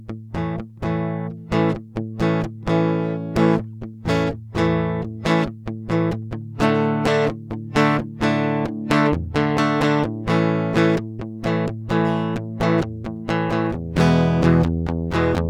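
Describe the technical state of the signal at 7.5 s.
At 7.5 s the music plays through intact, with no dropout, distortion or other fault at that moment.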